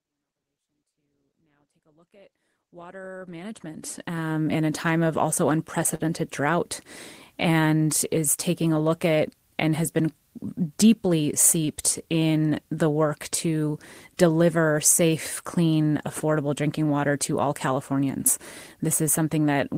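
At 5.95 to 6.01 s, just after "a time of also", the speech hangs briefly, with the last sound held unnaturally long before it picks up where it left off. This is a short stall from a late packet. The packet missed its slot, the jitter buffer ran empty, and the receiver stretched 38 ms of existing audio to cover the wait. No audio is lost, but everything after it lands 38 ms late. The smooth fade-in, ending at 4.48 s, comes before this point.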